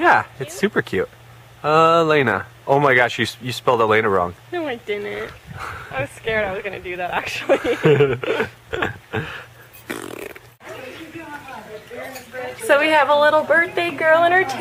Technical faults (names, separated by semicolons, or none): none